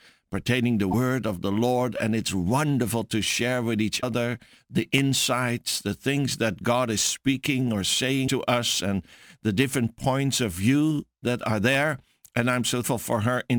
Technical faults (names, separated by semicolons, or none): sample clock jitter; damaged data in a compressed stream